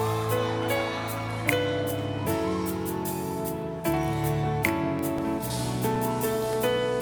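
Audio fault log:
4.80–6.53 s, CD scratch ticks: ten regular ticks, about six per second, each only a few milliseconds, as a blemish on the disc corrupts more data than error correction can rebuild on every turn. They show as thin, evenly spaced vertical lines on a spectrogram and brief notches in the waveform.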